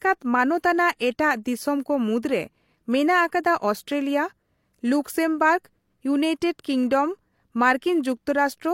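Transcoding between lossy codecs runs through the whole speech clip. Nothing is left above 16.3 kHz, and two kinds of coding damage sit together. This points to a low-rate HE-AAC encode that was likely re-encoded as MP3, which added its own artefacts to the earlier ones.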